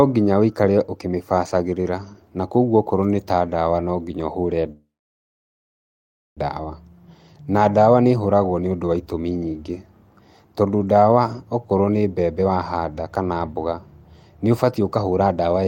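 A call audio freeze runs from 4.71 to 6.39 s, right after "ndawa no nginya ũhũre". The speech halts and a brief fading continuation of the last sound gives way to about 1.52 s of silence. The likely cause is packets held up in transit, which let the jitter buffer run empty. When the speech resumes it picks up exactly where it stopped, with nothing lost, so the rest of the clip now lags by about 1.65 s.

Jitter buffer speed-up follows in three stretches: 12.03–12.49 s at 107% speed, 13.31–13.75 s at 111%, and 14.43–15.63 s at 111%. Having built up a surplus, the receiver trims short pitch-period slices repeatedly to shrink the delay, removing roughly 40 ms, 70 ms and 150 ms in turn. The pitch stays put but the speech sounds noticeably hurried in these passages.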